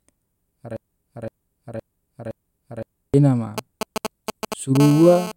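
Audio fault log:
0.77–3.14 s, broken-record loop: a 0.52 s chunk of the speech plays five times back to back, identical each pass. The stream has likely stalled and kept resending its last buffered fragment, so whatever was said during that stretch is simply gone.
3.58–4.77 s, GSM signalling bursts: a galloping dit-dit-dit of brief 217 Hz buzzes, fairly loud and only a few dB under the speech. A nearby 2G phone is sending short groups of radio bursts, and the audio circuitry rectifies them into buzzes.
4.80–5.32 s, GSM phone buzz: the pattern turns into a steady, raspy 217 Hz buzz with lots of harmonics, sitting about 11 dB below the speech. That's a nearby 2G phone now transmitting in bursts 217 times a second, as in a call, and its burst rate comes through directly as the buzz.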